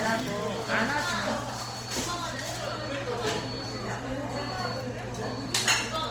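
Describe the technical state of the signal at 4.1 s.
At 4.1 s, as throughout the clip, the audio was likely squeezed through Opus compression at a low rate, around 24 kbps, which leaves band-filling noise that makes tones rough and grainy while full bandwidth extends to about 20.3 kHz.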